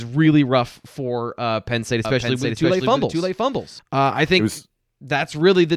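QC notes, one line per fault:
2.05–3.79 s, doubled audio track: a second full-band copy of the speech trails about half a second behind, roughly 5 dB quieter. It carries no room decay and starts and stops abruptly. The audio was likely captured twice, once through a slower path.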